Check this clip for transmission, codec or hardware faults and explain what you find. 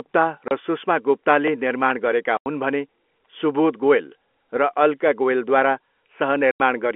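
The clip has one kind of fault, heard three times, carried over a G.711 A-law telephone line with its usual narrow band up to about 3.4 kHz.

Packet loss filled with silence occurs at 0.48 to 0.51 s, just before "र सुष्मा गुप्ताले निर्माण", at 2.37 to 2.46 s, between "सुष्मा गुप्ताले निर्माण गरेका" and "हुन् भने", and at 6.51 to 6.60 s. Missing packets were replaced with silence, leaving 30 ms and 90 ms holes, which fits a 30 ms packet length, with abrupt hard edges.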